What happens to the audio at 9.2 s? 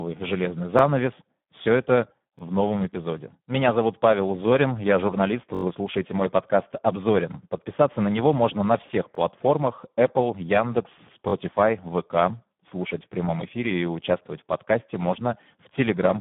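Right around there, from 9.15 to 9.17 s, you get a repeated buffer. New audio didn't reach the output in time, so the device replayed the block it had just played, which fits a 1024-sample buffer of about 21 ms. That stretch plays twice back to back with a hard join, so it lands as a tiny stutter, closer to a click or quick buzz than a clear repeat. Essentially nothing is lost, just doubled.

Underneath that, the whole recording is going through the Speex codec at a low setting, likely around 8 kbps. The damage is heavy. With so few bits for the excitation, the voice comes across noisy and hoarse, edging toward robotic. The band runs roughly 150 Hz to 3.5 kHz, and there's nothing at all above 3.7 kHz, so the speech sounds narrow, like a phone line, with no air on top.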